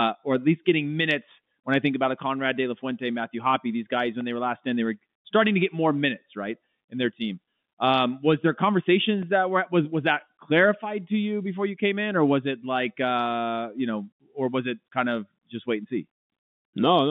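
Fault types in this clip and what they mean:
block of digital silence: the sound cuts out and back with no fade, so each gap is a tick: 1.45 ms at 4.21 s after "these guys when", and 2.9 ms at 9.22 s before "that were was was". Unlike packet-loss concealment, nothing fills the gap.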